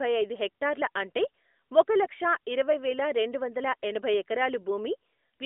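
No technical faults are audible.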